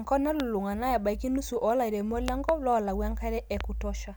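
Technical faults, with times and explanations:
0.40–0.42 s, 2.28–2.51 s, 3.61–3.63 s: loud pop, sharp pulses about 15 to 20 dB above the speech, with a double pop at 2.28 s, likely from a voltage spike from a switch or static.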